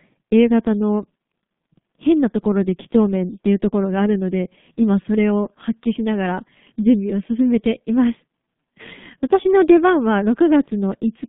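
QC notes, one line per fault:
Throughout: G.723.1 codec. Speech sounds muffled and hoarse, with blurred consonants. The band stops at 150 Hz and 3.6 kHz. Heavy coding fits about 6 kbit/s.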